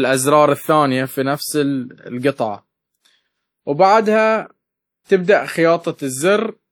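Throughout the speech there is plainly audible codec damage: a ringing, washy quality, with smeared transients and a hiss that swells and fades along with the signal. The likely cause is WMA compression, a transform codec whose quantisation noise spreads over tens of milliseconds around each block, and whose weaker spectral lines drop out at low rates. The degree of damage fits a bitrate around 48 kbps, and there is nothing above about 20 kHz.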